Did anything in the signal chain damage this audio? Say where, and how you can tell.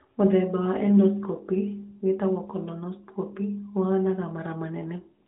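No, nothing in the signal chain damaged this audio.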